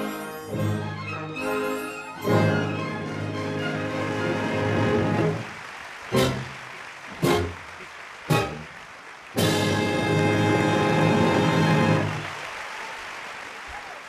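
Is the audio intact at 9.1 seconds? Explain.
No. At 9.1 seconds the audio sits inside a time-stretched section that runs from 4.59 s to the end of the clip. The pace jumps abruptly at 4.59 s to roughly 1.93 times normal speed while the pitch stays where it was, which likely comes from software compressing the audio to fit a shorter length by dropping short pieces to preserve pitch. The result sounds rushed.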